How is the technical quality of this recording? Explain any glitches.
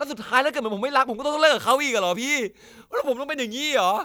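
From 1.71 s to the end, the speech has pre-emphasis left on. The treble was boosted and the matching cut never applied. The curve fits 50 µs FM emphasis, lifting 10 kHz about 11 dB over 1 kHz. It sounds thin, bright and sibilant.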